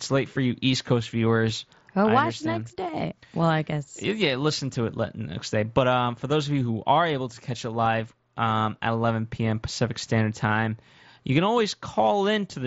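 No technical faults can be heard in the speech, which comes through a Bluetooth mSBC headset link behaving as that wideband codec normally does, with its band limited to about 8 kHz.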